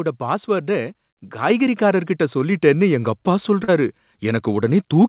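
At 1.5 s the call software judged the microphone too quiet and raised its input volume in a single microphone volume step. Speech and background jump together by about 4 dB. A second step at 2.52 s, just before "எங்க அப்பா", adds about 2 dB more.

From 3.64 to 3.70 s, right after "எங்க அப்பா", there is short concealed packet loss. About 40 ms of audio never reached the decoder in time. The receiver extended the preceding sound to fill the gap and then blended back, which leaves a brief smeared patch. This is heard through the G.711 call path's band limit, with nothing above 4 kHz.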